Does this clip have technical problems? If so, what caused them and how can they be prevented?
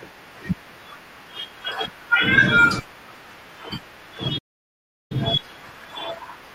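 Yes. There is a playback stall from 4.38 to 5.12 s. The speech cuts to silence for about 0.72 s, then resumes. The likely cause is the player starving for data or its thread being blocked. Larger buffering and a non-blocking audio thread prevent this.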